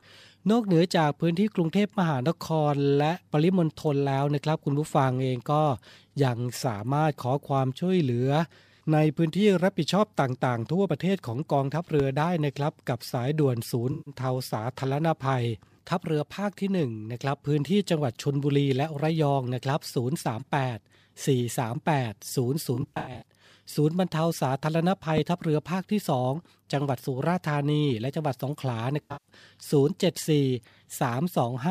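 A speech recording with two loud pops, at 12.00 and 25.18 s, each a single sharp thump roughly 10 dB above the speech, likely a switching or static transient. The talking continues underneath. AAC frame loss with concealment smears the speech into brief noisy, phasey patches at 13.91–14.14 s, 22.74–23.26 s and 29.02–29.29 s, where the decoder patches lost audio from the last good spectrum. This is a smear replacing the speech, not a transient on top of it.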